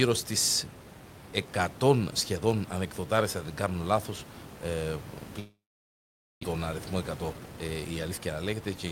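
From 5.39 to 6.45 s the sound smears into a fading buzz, then silence, and returns with about 0.6 s missing, likely a long network dropout. From 6.53 to 8.77 s it runs about 16% fast at unchanged pitch and sounds hurried: a jitter buffer speed-up trimming pitch periods to shed roughly 0.4 s of built-up delay.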